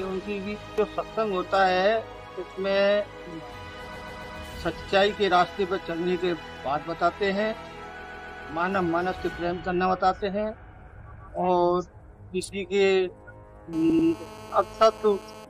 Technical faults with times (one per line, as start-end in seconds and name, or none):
3.95-4.37 repeated frames
8.04-8.45 repeated frames
11.10-11.24 repeated frames
13.73-15.45 GSM phone buzz
13.89-14.07 repeated frames